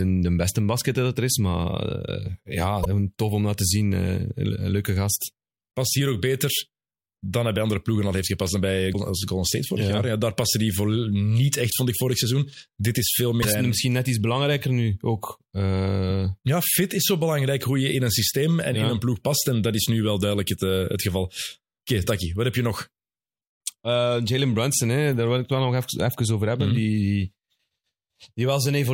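Damaged data in a compressed stream breaks up this speech clip three times: corrupted bytes make the decoder misread frames, lose sync and hunt for the next valid frame header. Each break is heard as a short glitch of about 50 ms, at 2.81–2.86 s just before "tof om dat te", at 8.90–8.95 s right after "heeft gepast dan bij", and at 13.39–13.45 s right after "is veel".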